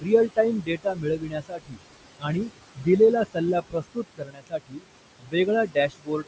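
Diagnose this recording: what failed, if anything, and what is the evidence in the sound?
Noise suppressor artifacts run through the whole clip, produced at the call-processing stage. The steady room noise, sitting about 12 dB below the speech, is pulled down by about 21 dB between phrases and rises back under them. The per-band gains shift frame by frame.

Speech cut by the noise suppressor, also in call processing, occurs at 0.0 to 0.09 s, 0.6 to 1.79 s, 2.75 to 2.87 s, 3.61 to 4.86 s, 5.19 to 5.48 s and from 5.66 s to the end. Here the suppressor mistook quieter speech for noise and lowered it with the background by about 15 to 22 dB, so those stretches sound swallowed and faint.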